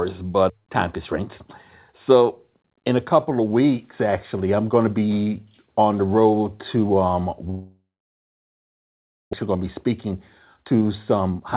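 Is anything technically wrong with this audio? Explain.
Yes, there are a couple of problems, both on top of a call path whose G.711 mu-law coding leaves nothing above 4 kHz.

From 7.5 s to about 9.35 s the audio smears into a fading buzz and then goes silent for most of that stretch, roughly a second and a half. When it resumes, about a second of material is simply gone. The likely cause is a long network dropout: the receiver stretched the last sound it had, then had nothing left to play.

Right after that there's a jitter buffer speed-up. From 9.43 to 10.06 s playback runs at 106% and trims around 50 ms. From 10.56 s to the end it runs at 122% and cuts about 200 ms. The late audio arrived in a bunch, leaving roughly 0.7 s of extra delay, so the receiver snipped out pitch-period slices to catch up. That keeps the pitch the same but makes the sound feel noticeably rushed, especially in the second stretch.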